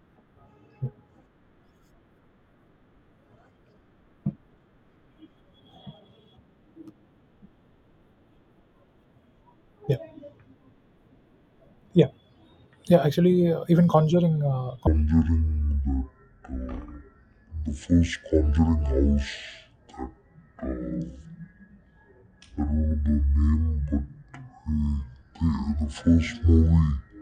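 From 14.87 s, before "in that that", a section at the wrong speed plays at 0.504x, likely from a clock mismatch. Speech turns slow and roughly ten semitones deeper at once, unlike a pure pitch shift.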